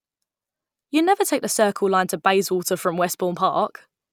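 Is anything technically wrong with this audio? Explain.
No, nothing technically wrong turns up here; the speech comes across without any faults to point to.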